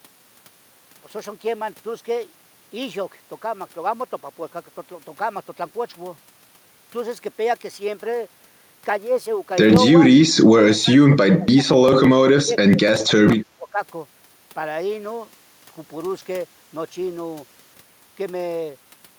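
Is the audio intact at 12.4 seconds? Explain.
No. Speech suppressed in double talk runs from 12.12 to 12.77 s. The talker dips sharply, by roughly 25 dB at its deepest, in broken pieces adding up to about a third of a second, likely because an echo canceller could not separate the talker from overlapping far-end echo and turned both down.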